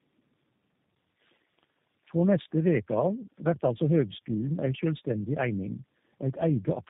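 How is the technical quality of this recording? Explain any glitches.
Technical quality is held back by one fault running the whole way through: tandem speech coding. The call seems to have crossed several network links, each decoding and re-encoding the speech, so every low-rate coder worked on the last one's damage. The roughness and warble fit about three passes through an 8 kbit/s G.729A-type coder with 64 kbit/s G.711 A-law links between. Nothing comes through above about 3.8 kHz, so speech sounds muffled, gritty and watery from start to finish.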